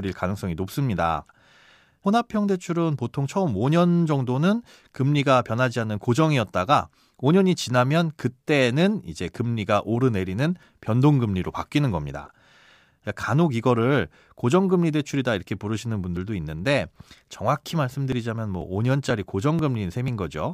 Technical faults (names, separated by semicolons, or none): periodic USB or driver dropouts